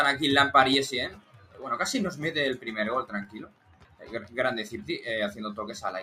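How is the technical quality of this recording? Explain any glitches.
The technical quality is compromised by a noise suppressor applied to music or sounds, active through the whole clip. Steady and sustained parts keep sinking and recovering in level, with swings of around 15 dB, so the sound pumps and thins while sharper onsets come through more intact. A processor built to clean up speech is treating held tones, ambience and decaying tails as background noise and pulling them down.

The clearest cases of sound cut by the noise suppressor come at 1.09 to 1.64 s and 3.04 to 4.35 s. In the first, about half a second of material drops by up to about 15 dB. The second is longer, with roughly a second affected and the deepest drop at about 16 dB. In both, the sustained content sags and its decay is cut short, because the suppressor judged it to be noise and attenuated it harder than the surrounding audio.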